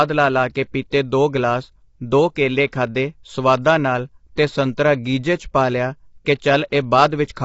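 The speech appears to have passed through a low-delay AAC encoder, likely AAC-ELD at a low bitrate, around 24 kbps. Its short frames resolve pitch harmonics poorly, so the voice sounds plainly rough and grainy throughout, with noise between harmonics and nothing above 7.7 kHz.

At 0.90 to 0.92 s, between "ਲਾ ਲਾ ਕੇ" and "ਦੋ ਗਲਾਸ ਦੋ ਕੇਲੇ", the codec spread quantisation noise across a block ahead of a sharp attack, producing pre-echo. A brief hiss of about 20 ms leaks in before the onset, which sounds softened and smeared.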